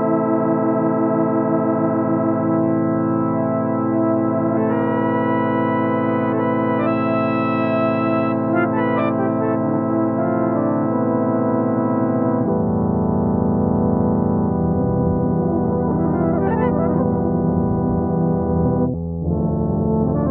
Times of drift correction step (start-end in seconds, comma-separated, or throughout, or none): none